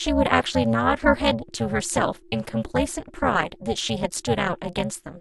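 The speech carries an overlap-add ripple throughout: frames were rejoined with an overlap that doesn't sum to constant gain, so the level dips by about 60 dB around 300 times a second, giving a rough robotic buzz. The waveform envelope looks comb-like, and a spectrogram shows evenly spaced vertical striations.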